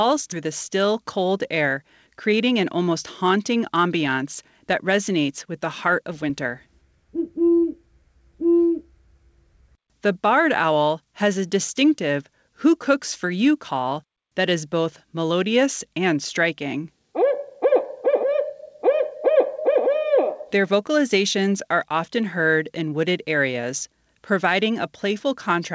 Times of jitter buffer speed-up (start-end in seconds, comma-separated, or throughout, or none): 0.46-6.68